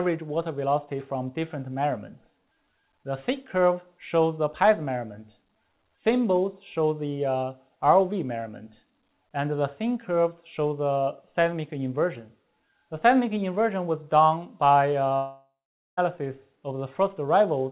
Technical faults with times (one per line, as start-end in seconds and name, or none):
15.16-15.99 long network dropout